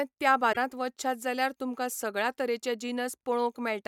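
Speech, with a brief disturbance from 0.52 to 0.57 s, just before "वचशात जाल्यार तुमकां सगळ्या". The sound skips forward rather than pausing, and the 50 ms of damage spans about two frames, which fits 24 ms MP3 frames. The likely cause is a broken MP3 bit reservoir: after a cut, the next frames looked back for borrowed data and decoded bytes from the wrong frame. A plain dropout would leave clean silence with no skip.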